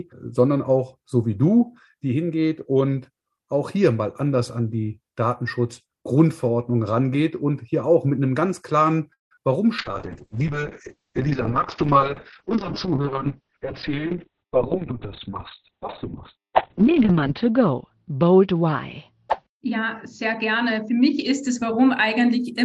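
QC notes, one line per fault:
9.13–9.41 s, call audio freeze: the last sound is briefly stretched into a fading buzz or hiss, then about 150 ms of silence follows before playback resumes exactly where it stopped. The likely cause is delayed packets draining the jitter buffer, so the audio is postponed rather than lost.
9.35–9.38 s, short concealed packet loss: roughly 20 ms of audio never arrived in time, and the receiver covered the hole by extending the preceding sound before blending back. The result is a tiny smear or wobble inside the freeze's tail.
9.79–22.45 s, call bitrate drop: the sound turns rough and watery, and its top end disappears as bandwidth falls from 20 kHz to 4 kHz. This points to a cut from about 48 kbps down to 6 kbps, with the worst stretch lasting 4.5 s.
12.99–13.58 s and 19.70–21.87 s, jitter buffer speed-up: the receiver drops short pitch-period slices to shrink an overfilled buffer. 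This plays the sound about 8% and then 5% faster at unchanged pitch, trimming around 50 ms and about a tenth of a second.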